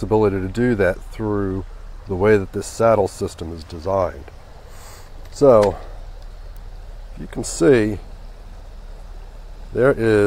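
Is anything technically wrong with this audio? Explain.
Yes, there is one fault. At 6.57 s, a nearby switch, motor or static discharge likely arced briefly and coupled into the audio line, producing an electrical switching spike. Because the arc lasts only a couple of milliseconds, it registers as a sharp snap laid on top of the sound rather than blending into it. The spike peaks at roughly -25 dBFS.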